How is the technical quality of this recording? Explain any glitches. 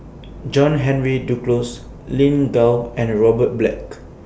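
No glitches can be heard anywhere in the recording. There is nothing technical to explain, as the speech carries no audible faults.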